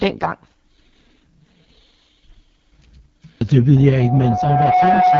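A speech clip passed through the AMR wideband (HD Voice) codec at heavy compression, which fits its lowest 6.6 kbit/s mode, leaving nothing above 7 kHz and a rough, raspy texture throughout. From 3.75 s to the end at 5.20 s, a microphone picks up its own loudspeaker and the loop runs away at 733 Hz, producing a loudspeaker feedback squeal that builds over about a second to roughly the level of the speech.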